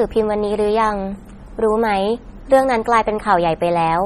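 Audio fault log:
throughout MP3 compression, likely: heavy watery swirl as weak bands blink between frames, fitting about 32 kbps; spectrogram shows patchy, flickering blocks up to 20.3 kHz.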